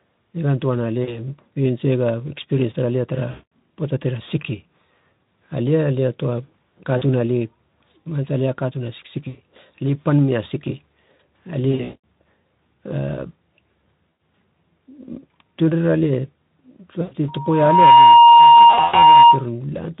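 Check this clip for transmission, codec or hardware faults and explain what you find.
Two problems show up here: repeated packet loss and a feedback squeal near the end.

VoIP packet loss concealed by the speech codec hits at 1.03, 3.31, 6.97, 9.27, 11.71, 14.09, 17.01 and 18.70 s, covering 40 to 260 ms of missing audio. The decoder stretches its last pitch and filter and fades them out, so the speech smears into a buzzy tone or coloured noise that fades and stays weak briefly afterward.

A loudspeaker feedback squeal runs from 17.28 to 19.46 s. A mic is picking up its own speaker, and at 939 Hz the loop gain tops one. That tone swells in under a second into a steady whine, roughly 15 dB above the speech.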